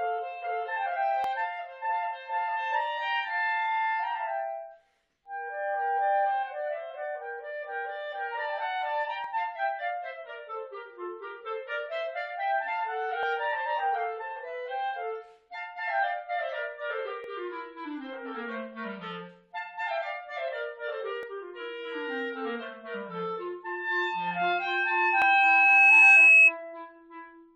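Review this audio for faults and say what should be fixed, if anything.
Overlap between stream segments causes short clicks or skips at 1.24, 5.26, 9.24, 13.23, 17.24, 21.23 and 25.22 s. They repeat every 4 seconds, at each segment boundary. Overlapping time stamps make the player discard audio that was not actually doubled, so the waveform jumps. Align segment time stamps so consecutive segments meet exactly, without trimming.

Loudspeaker feedback squeal runs from 24.07 to 26.53 s. It is a single tone at 2.6 kHz. It swells over about two seconds until it sits roughly 15 dB above the sound. The microphone hears its own loudspeaker, and loop gain exceeds one at that frequency. Reduce loop gain by lowering monitor level, repositioning the microphone, or notching 2.6 kHz.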